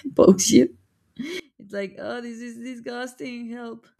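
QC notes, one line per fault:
1.40–3.99 s, one channel inverted: in mono the speech falls by about 22 dB to a faint residue. The likely cause is reversed polarity on one side, cancelling everything common to both channels. Unlike a dropout or gain fault, the sound keeps going but loses its centre.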